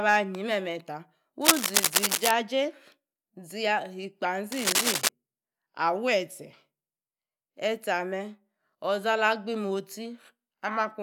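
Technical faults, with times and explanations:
1.41–2.32 s and 4.52–5.09 s, cable scratch noise: two stretches of dense, ragged crackle sit on top of the speech, the first a bit louder than the talker and the second about level with it. It's the sound you'd get from a worn lead or connector being nudged, likely a contact whose resistance jumps around as it moves, so the signal picks up uneven bursts of noise that come across as scratching or rustling for under a second each time.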